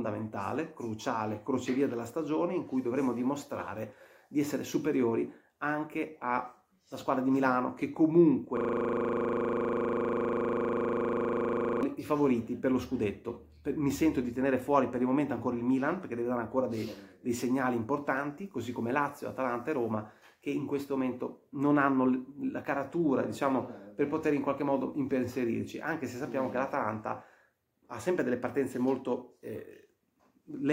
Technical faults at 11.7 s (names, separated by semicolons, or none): system hang loop